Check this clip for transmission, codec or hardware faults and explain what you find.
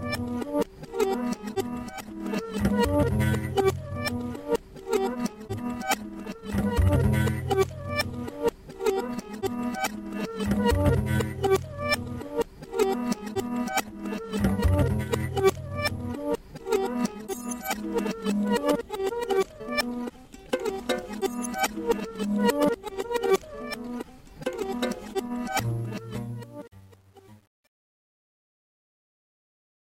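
Truncation distortion on a fade, from 25.6 s to the end at 29.91 s: the fade-out, which starts around 25.6 s, is rendered with too few bits and no dither, so the falling level lands on coarse steps. From 26.15 s onward the waveform collapses into blocky square steps, and the tail of the fade sounds gritty rather than thinning away. The coarseness fits a word length of about 9 bits.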